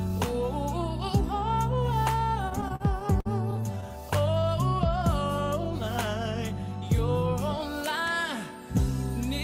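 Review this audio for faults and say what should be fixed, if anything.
Repeated stalls (stutter) from 2.49 to 3.84 s: the jitter buffer ran dry about a dozen times, holding the last sound up to 50 ms each time. Prevent it with more jitter-buffer headroom or steadier packet delivery.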